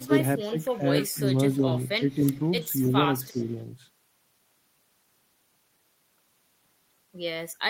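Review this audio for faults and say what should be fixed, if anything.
A faint delayed copy of the speech trails the talker from 0.00 to 1.21 s, 1.53 to 2.51 s, 2.83 to 2.92 s and 3.25 to 3.51 s. It sits roughly 25 dB below the direct speech and lags it by 298 ms. This is likely an echo leak: the far end's loudspeaker output reached its microphone, and its echo canceller failed to remove all of it. On a spectrogram, the harmonic bands show a weak duplicate shifted right by about 0.3 s. On the waveform, low-level ripples continue into gaps where the talker has stopped. To prevent it, the far end should use a headset, or allow the echo canceller a longer tail and a stronger residual-echo suppressor.

The far end's voice also dips in two places. The first is a brief cut of about 15 dB from 0.06 to 0.11 s. The second runs from 0.44 to 1.63 s, with scattered drops of about 10 dB adding up to roughly 0.4 s. 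These dips coincide with the echo bursts, which points to speech suppressed in double talk. The canceller likely mistook the mixture for echo and attenuated everything. On the waveform, the envelope shows sudden notches. On a spectrogram, the harmonics fade. To prevent it, use double-talk detection that freezes adaptation rather than clamping the gain.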